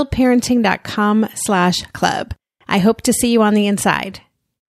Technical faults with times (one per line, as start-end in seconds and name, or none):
none